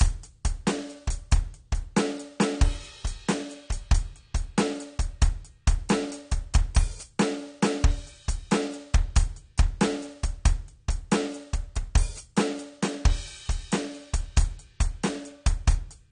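From start to finish the music sounds like AAC compression, and the damage is plainly audible. Nothing comes through above about 9.7 kHz, so the top end is dull and airless. The likely cause is an AAC-LC encode at a very low bitrate, something around 32 kbps, where the encoder can't afford the high bands and smears or drops detail. Sustained notes pick up that warbly, swirly texture.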